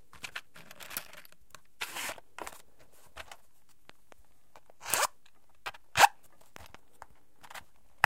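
Sounds interrupted by two loud pops, each a quick double thump around 10 dB above the signal, at 3.90 to 4.14 s and 6.56 to 6.77 s, likely from a voltage pulse such as a switch or static. Unlike a dropout, the sound carries on underneath.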